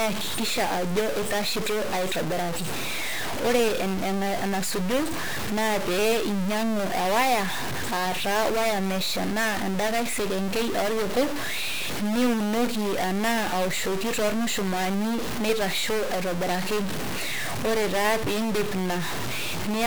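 Throughout the speech a harsh buzz tracks the waveform and pauses fill with noise, unlike steady hiss, likely a stuck bit worth around -25 dBFS.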